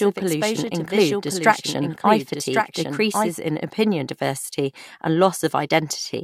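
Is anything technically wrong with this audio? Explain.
Yes. From the start until 3.3 s, the speech repeats roughly a second behind itself, about 5 dB quieter, dry and full-band, and the repeat cuts off abruptly. This is a doubled audio track, likely a second out-of-step copy from a slower capture path or an edit.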